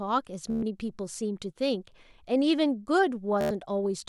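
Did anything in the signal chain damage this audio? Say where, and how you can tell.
Yes, Bluetooth stutter on the wireless link, at 0.50–0.63 s and 3.41–3.51 s. Packets went missing, so the receiver looped its last short buffer, giving a machine-gun buzz rather than a silent dropout. Then it jumped ahead, skipping about 120 ms and 93 ms.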